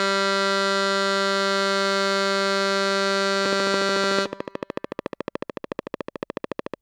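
From 3.46 s to 6.75 s a train of clicks runs over the music. About fifty near-identical pulses arrive evenly, 13.7 per second, about 10 dB above the signal. They sound like steady, rapid ticking. Electrical interference is the likely cause.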